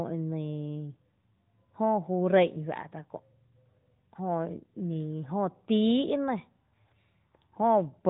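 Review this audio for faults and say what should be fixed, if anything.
No faults; nothing to fix.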